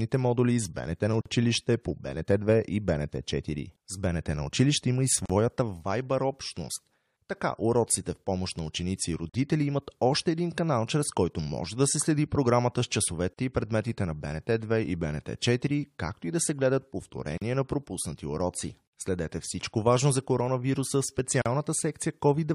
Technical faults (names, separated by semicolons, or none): gap at a join of encoded pieces